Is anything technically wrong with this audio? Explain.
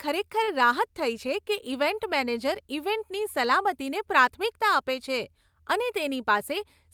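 Yes. Between 0.43 and 0.56 s there is a short stall from a late packet. The packet arrived after it was due, the jitter buffer emptied, and the receiver held the last sound for about 41 ms before resuming at the same point. Nothing is lost, but one sound is drawn out with a faint buzzy dip. On a spectrogram the harmonics run flat and smeared for that stretch, and the waveform shows a repeated, slightly sagging cycle.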